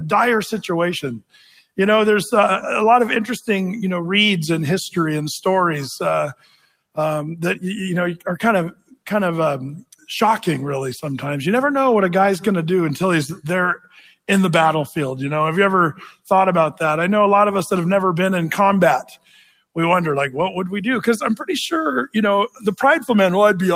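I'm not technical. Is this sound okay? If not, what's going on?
No. A noise suppressor applied to music or sounds is active across the whole clip. It treats steady tones and lingering tails as background noise and keeps turning them down, so the level gently pumps up and down while sharper onsets pass through.

Sound cut by the noise suppressor shows up as sharper dips at 1.2, 6.3, 8.7, 9.8, 13.8, 19.0 and 22.5 seconds. In each one the sound is pulled down hard for a brief moment lasting up to roughly half a second or more.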